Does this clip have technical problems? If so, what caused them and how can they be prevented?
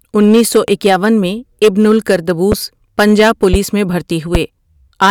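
Yes. Hard clipping runs through the whole speech clip: the signal is driven about 13 dB past full scale, so a few percent of peaks are cut flat, adding harsh crackle. Set input gain lower, leaving headroom.

Loud pops occur at 0.68 s (between "انیس سو" and "اکیاون میں ابن"), 2.52 s, 3.53 s and 4.35 s. Each is a single 30 ms pulse, roughly 10 to 20 dB above the speech, likely from connector, switch or static transients. Secure cables, avoid switching during recording, and ground the equipment.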